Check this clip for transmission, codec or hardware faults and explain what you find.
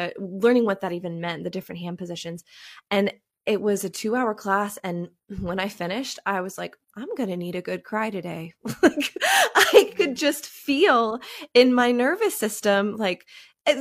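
Nothing stood out on listening to this speech clip.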